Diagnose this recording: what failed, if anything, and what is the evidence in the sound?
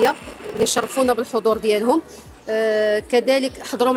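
From the start to about 0.90 s the sound carries a steady 38.3 Hz buzz and runs slow, at 0.889 times normal speed, with its pitch essentially unchanged. This is a padded block size mismatch at the driver or buffer stage: each block is written short, which fits 1024-sample writes, and zero-filled to the reader's longer block.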